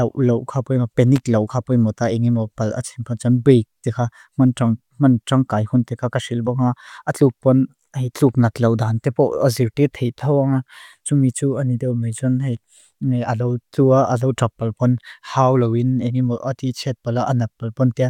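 A brief, irregular burst of crackle and scratching from 1.16 to 1.24 s is loose connector crackle: a worn contact briefly made and broke, chopping the speech signal.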